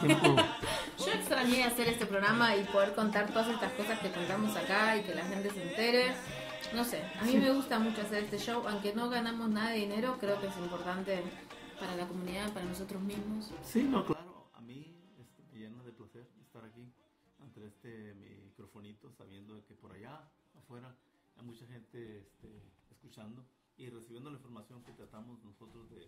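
From about 14.13 s through to the end, the sound suddenly collapses: the level falls by about 21 dB, and the centre of the mix seems to hollow out, leaving a faint remainder. That's the signature of one channel inverted, likely the cause here. With one side's polarity flipped, anything common to left and right cancels when they're summed to mono, so only the small difference between channels survives.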